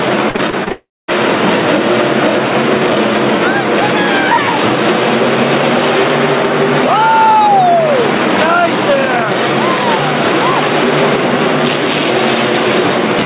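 Repeated packet loss (robotic sound) runs from 0.3 to 0.72 s. Over this stretch the audio breaks up five times in quick succession, each hole patched by stretching out the sound just before it. The longest gap is 41 ms, and about 120 ms of real audio goes missing in total, so roughly a quarter of the span is filler. The result is choppy, with small pieces of the sound chopped away.

From 0.72 to 1.1 s the audio stops entirely, and the likely cause is a long network dropout. For the first part the receiver keeps extending the last fragment as a fading buzz or hiss, then about 220 ms of near silence follows. In all about 360 ms of the original audio never plays, and the sound resumes at 1.1 s without that lost section. Throughout, nothing is heard above 4 kHz, which fits a telephone-band G.711 A-law call codec at 64 kbps.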